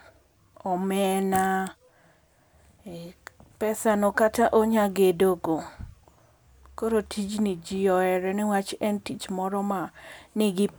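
A speech recording with no technical fault to be heard. Nothing in the signal breaks, distorts or changes character at any point.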